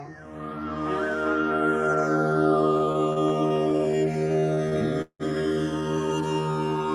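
From start to finish the channels are drifting apart. Separate clocks, roughly 150 ppm off, slide the inter-channel delay toward about a millisecond, so mono sums flange slowly rather than sit as a fixed comb.

Between 2.77 and 5.23 s, repeated stalls (stutter) appear: 17 late-packet waits were filled by stretching the last sound, about half a second in total and up to 179 ms at once. Nothing drops out, but the sound drags rather than skipping.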